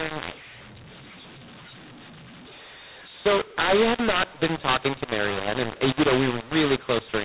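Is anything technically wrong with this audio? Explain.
Yes. Throughout the speech, the G.711 A-law coding is being read back as mu-law. The two companding curves don't match, so sample levels are remapped: some too loud, some too quiet, and near-silent samples pushed well up. The result is harsh, gritty distortion and noise filling the pauses, on top of the normal 4 kHz telephone bandwidth.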